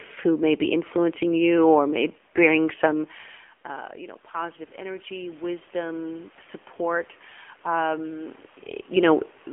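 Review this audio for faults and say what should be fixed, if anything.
The speech sounds buzzy and synthetic from start to finish, thin at both ends of the band, with nothing above 3.5 kHz. This is the AMR narrowband mobile codec, whose pulse-driven vocal-tract model at what sounds like a low mode around 7.4 kbps, over a 250 Hz to 3.4 kHz line band, plainly damages the voice. Route the call over a wideband codec such as AMR-WB or Opus, or use a higher AMR mode. The room noise and the level shifts from the talker moving near 3 s and 8.5 s are part of the recording, not system faults.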